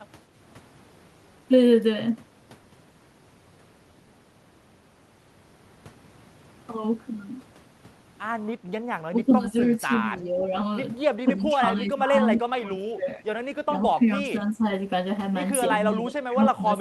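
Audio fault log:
9.1–9.54, 9.76–9.92, 10.16–10.51, 11.24–12.15, 12.33–13.25, 13.67–13.74, 13.95–14.66 and 15.95 s to the end, speech suppressed in double talk: the speech repeatedly dips, from a slight drop to around 25 dB near 12.3–13.3 s. It is likely the echo canceller attenuating the near talker while far-end audio overlaps.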